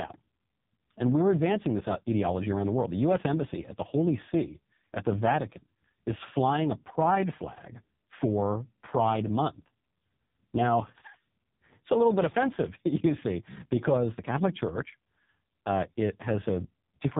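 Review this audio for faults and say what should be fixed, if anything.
Throughout the speech, the AMR narrowband mobile codec is clearly audible. Nothing passes above 3.8 kHz, and the voice sounds heavily buzzy and synthetic. That fits AMR-NB's lowest 4.75 kbps mode, where a vocal-tract model gets too few excitation pulses per subframe. Unlike a plain low-pass filter, this damages the texture of the voice, not just its brightness. To prevent it, record locally or route the audio over a wideband path rather than a narrowband mobile call.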